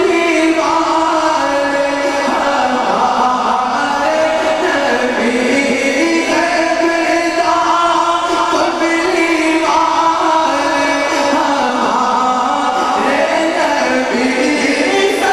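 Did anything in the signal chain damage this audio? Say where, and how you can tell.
Yes. At 11.59 to 11.70 s the audio lurches forward, dropping roughly 50 ms. That is compressed frames skipped at the codec stage: whole frames were missing or rejected by the decoder, so playback jumped ahead by their length.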